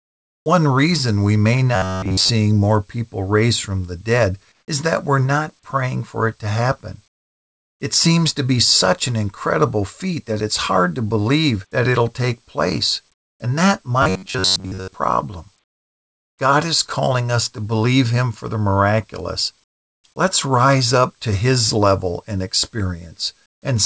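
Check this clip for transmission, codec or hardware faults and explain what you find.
Two faults recur in this speech clip: comfort noise replacing the background in the pauses, and a robotic buzz from repeated short buffers.

Comfort noise in place of the background appears seven times: 0.00 to 0.46 s, 4.52 to 4.68 s, 7.08 to 7.80 s, 13.14 to 13.40 s, 15.64 to 16.38 s, 19.64 to 20.04 s and 23.46 to 23.62 s. The real room tone vanishes. A flat, even hiss takes its place. It drops by about 3 to 24 dB, most heavily after 7 s. The likely cause is discontinuous transmission. The sender goes quiet when it detects no speech, and the receiver synthesises noise, which fits RFC 3389 comfort noise.

Robotic sound from repeated short buffers occurs at 1.76 to 2.31 s and 14.03 to 14.95 s. The speech turns metallic and buzzy, with a fixed pitch near 94 Hz. It still roughly tracks the syllables. Late-arriving audio was likely covered by looping the last fragment, and most of that stretch is repeats. 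A 94 Hz buzz fits a loop of about 10.7 ms. Each repetition replaces the skipped audio, and together they impose that fixed-rate drone.

The call path itself leaves nothing above 8 kHz, which points to G.722 at 64 kbps.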